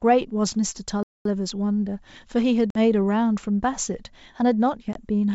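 A speech recording carried over a G.722 wideband call, whose coding at 64 kbit/s adds little more than a faint upper-band hiss, suffers two kinds of fault. At 1.03 s the player most likely ran short of data or had its output thread held up, and this playback stall cuts the speech off in mid-flow for about 224 ms. The audio then resumes at 1.25 s. Later the call suffers packet loss on an ADPCM call. At 2.70 s about 50 ms of audio, a handful of packets, fails to arrive and is filled with silence. The decoder's adaptive predictor and step size no longer match the sender's, so the speech returns with a hard-edged gap and a brief, slightly distorted stretch that settles by 2.78 s. A smaller loss at 4.93 s, about 20 ms or a couple of packets, produces the same hole and the same recovery, which ends by 5.01 s.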